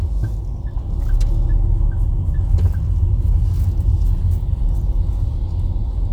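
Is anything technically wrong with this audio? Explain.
No, nothing technically wrong can be heard in this recording of sounds, as the signal stays intact throughout.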